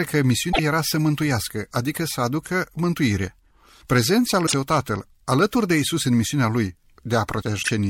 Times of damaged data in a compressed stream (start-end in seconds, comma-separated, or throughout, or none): 0.48-0.59, 4.43-4.54, 7.59-7.69